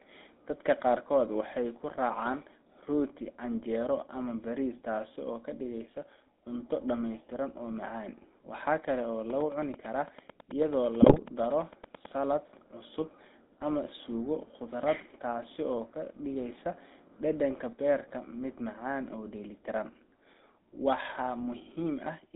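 Throughout, the GSM full-rate codec, at a rate consistent with 13 kbps, confines the speech to about 250 Hz to 3.7 kHz and adds a plainly audible buzzy, gravelly roughness. From 11.02 to 11.19 s, GSM bit errors corrupt the decoder's filter, pitch and gain values, so the speech breaks into squawks, pops and gargling.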